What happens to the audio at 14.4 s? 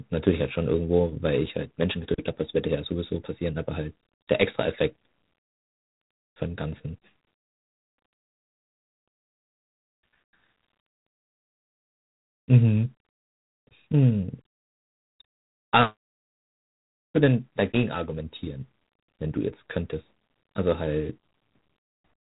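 At 14.4 s the speech carries G.726 ADPCM damage, which runs through the whole clip rather than starting there. The codec sends only a few bits per sample describing how each sample differs from a running prediction, and the resulting error rides on the signal as a harsh, rasping hiss that rises and falls with the speech level. The roughness points to the 24 kbit/s mode, and nothing reaches above 3.8 kHz. A simple telephone band-limit would sound muffled but clean, without this level-tracking grit.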